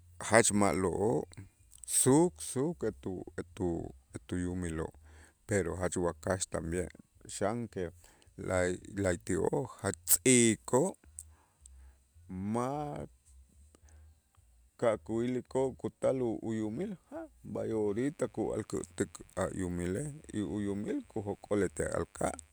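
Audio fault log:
17.84–22.53 s, mains buzz: a steady, raspy buzz sits low beneath the speech, roughly 40 dB down, from switching spikes on a 50 Hz supply leaking in.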